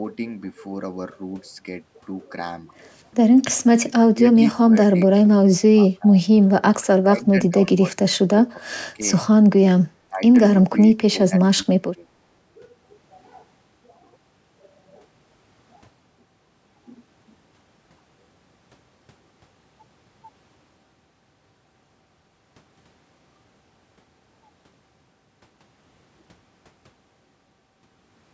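Speech passed through call microphone processing, with content stopping near 8 kHz, shows speech suppressed in double talk at 3.84–4.36, 4.55–4.77, 5.73–6.22, 6.72–6.78, 7.01–9.03, 10.09–10.22 and 11.12–12.19 s. The level ducks by roughly 15 to 25 dB in broken stretches, deepest around 7 to 9 s and 11 to 12 s. The likely cause is an echo canceller that could not separate this talker from far-end loudspeaker echo and attenuated both.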